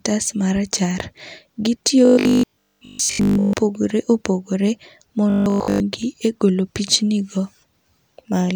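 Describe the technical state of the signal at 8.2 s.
Nothing is wrong with the signal at 8.2 s; the speech there comes through intact, with no audible fault.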